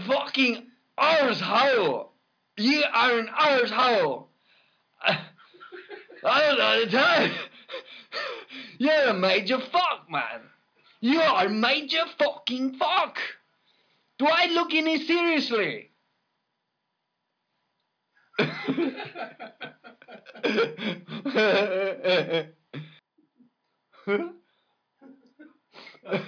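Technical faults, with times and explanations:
No technical faults are audible anywhere in the audio.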